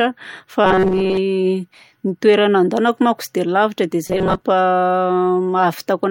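Audio likely arrived too seldom, so roughly 5 ms buffers were repeated over about 70% of each affected stretch. The result is robotic sound, a rigid 188 Hz buzz, at 0.65–1.17 s and 4.07–4.42 s.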